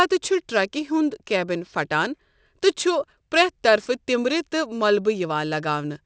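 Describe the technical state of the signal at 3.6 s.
At 3.6 s the sibilants sound gritty and metallic, with hiss pressing hard against a ceiling near 8 kHz. This is aliasing, present throughout the clip. The sample rate was lowered, most likely from 48 kHz to 16 kHz, without an anti-alias filter, so content above 8 kHz folds back as false tones roughly 20 dB below the speech.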